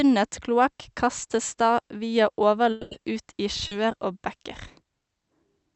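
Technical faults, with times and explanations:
2.71–2.94 s, long network dropout: right after "kloakk kastes da via" the sound turns into a smeared, fading buzz for about 200 ms and then picks up further on. That's likely a stretch of audio that never arrived, with the receiver stretching the last sound across the gap instead of going silent.
3.67–3.74 s, short concealed packet loss: a quick smear, roughly 40 ms, where a bit of audio went missing and the decoder papered over it by continuing the previous sound, then blended back in. It's brief, more a wobble than a gap, heard through the call codec's roughly 8 kHz top end.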